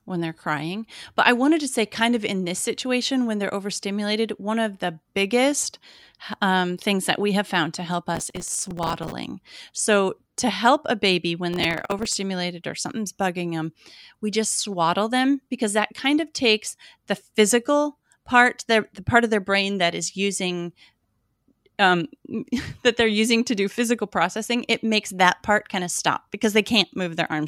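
Just after "have found to help", from 8.15 to 9.12 s, processor overload crackle tears through the speech. Many short buffers, a few milliseconds each, miss their deadlines and replay stale audio. It returns from 11.53 to 12.16 s, ending before "or something's bugging them".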